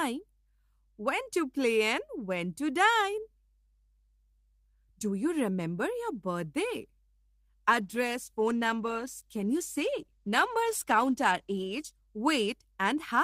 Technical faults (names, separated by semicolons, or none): call bitrate drop